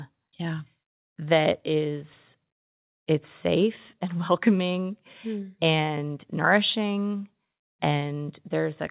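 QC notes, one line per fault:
No faults heard in the speech. It has come through the WebRTC call path with nothing above about 4 kHz, a narrowband limit that fits G.711 mu-law telephone coding.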